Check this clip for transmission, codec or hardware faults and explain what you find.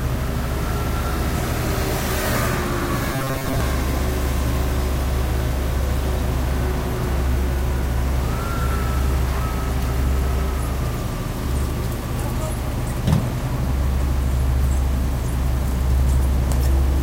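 One fault is audible, a stretch of robotic sound from repeated short buffers between 3.13 and 3.61 s. Over that half-second the sound goes rigid and metallic, with a steady buzz at 134 Hz pressed onto it while its broad shape still comes through. The likely cause is audio arriving too slowly, so playback kept looping a tiny slice of about 7.5 ms, the period of that buzz, for roughly half the span while the real material in between was skipped.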